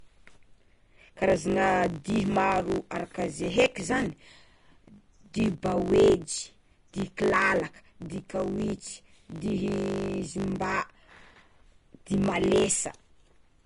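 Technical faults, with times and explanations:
throughout: block size mismatch (truncated). Each block loses its tail, leaving a steady 50 Hz buzz and speech running 1.07 times fast. This fits blocks of 1024 samples being read short. A spectrogram shows vertical striations every 20 ms, and the waveform shows jumps at each cut.
throughout: Vorbis compression, likely the cause. Nothing is present above 10.5 kHz, and the treble is plainly hissy and grainy, pointing to a low bitrate near 40 kbps. A spectrogram shows a flat ceiling at 10.5 kHz, with blotchy, speckled high bands where coarse quantisation replaced detail with noise.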